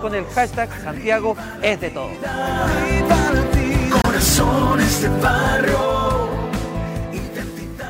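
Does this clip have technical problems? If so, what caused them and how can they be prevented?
Yes. Between 4.02 and 4.06 s the sound drops out for about 23 ms, which fits a single lost packet, likely a Bluetooth dropout. The waveform shows a flat gap and the spectrogram a blank vertical band, and the sound then resumes as though it had kept playing. Keep the headphones close to the source, with nothing in between, and away from crowded 2.4 GHz traffic.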